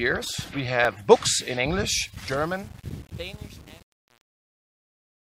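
At 0.84 s there is a repeated buffer. New audio arrived late, so the device played the last block again. One tiny piece sounds twice with a hard join, heard as a click. The length fits a 10 ms buffer.

From 2.14 s to the end at 5.34 s, the fade-out carries truncation distortion on a fade. But the gain stage keeps too few bits and adds no dither, which fits an 8-bit stage. From 2.17 s the quiet tail turns into coarse steps. It sounds gritty.

At 2.27 s the repeated buffer returns as another single click. The same 10 ms piece plays twice.

From 3.68 to 3.70 s it happens again, with two extra plays. The piece sounds three times. This gives a slightly longer stutter, close to a brief buzz.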